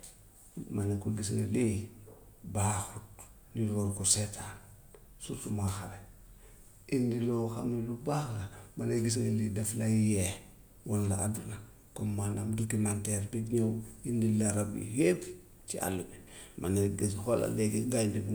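No technical faults are audible.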